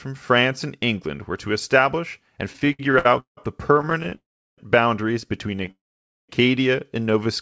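Repeated stalls (stutter) run from 2.53 to 3.38 s. Packets arrived late, so the jitter buffer kept emptying. Eight gaps, the longest 172 ms, were filled by stretching the last sound, leaving the speech dragging and halting. Another stutter from 3.74 to 4.13 s has twelve shorter gaps of at most 23 ms.

A call audio freeze follows at 4.15 to 4.59 s. The speech stops, the held sound fades, and about 360 ms of silence follows before it resumes where it left off. The likely cause is held-up packets draining the buffer.

A brief stutter with four tiny gaps from 5.51 to 5.68 s leads into a second freeze from 5.71 to 6.30 s, which includes about 510 ms of silence.

A jitter buffer slow-down comes at 7.03 to 7.25 s. The buffer repeated single pitch periods or bits of pauses to rebuild its reserve, adding 37 ms and playing at 87% speed without changing the pitch.

Throughout, nothing is heard above 8 kHz, which fits a G.722 call codec at 64 kbps.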